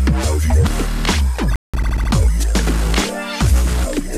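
A rebuffering stall runs from 1.56 to 1.74 s. The player used up the audio it had already downloaded and had to halt until more data came in, so the sound drops to dead silence for about 178 ms. When playback restarts, it picks up at exactly the point where it broke off. No material is skipped or repeated; the gap simply inserts extra time, which is heard as an abrupt pause.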